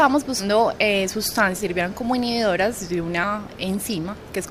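Compressed frames skipped at 0.39, 1.58 and 3.23 s: whole blocks of encoded audio never play, so the sound jumps ahead by roughly 0.2, 0.3 and 0.1 s, consistent with 10 ms frames.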